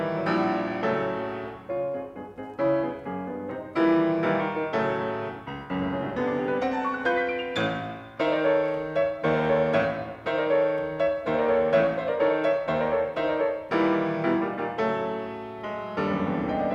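No technical faults are audible anywhere in the audio.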